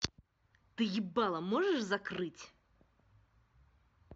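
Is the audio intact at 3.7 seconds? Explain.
Yes, at 3.7 seconds the audio is intact, with no dropout, click, distortion or other fault to be heard at that point in the speech.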